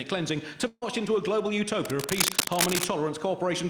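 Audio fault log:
0.67–0.84 s, burst of packet loss: for about 140 ms the sound stops advancing. The last fragment is stretched out and faded for roughly 140 ms, ending in about 20 ms of silence, and the audio resumes about 140 ms further on with that stretch missing. On a spectrogram the spectrum is frozen into flat horizontal bands that dim and then go blank. On the waveform, repeating cycles shrink to a flat line before the signal picks up abruptly.
1.85–2.84 s, cable scratch noise: for about a second, dense, irregular scratching and rustling sits over the sound at roughly the same loudness, likely from a worn cable, connector or control being moved while its contact resistance jumps about. On a spectrogram this shows as broadband vertical streaks and smudges clustered unevenly across the full frequency range. On the waveform it looks like ragged, spiky noise bursts riding on the signal.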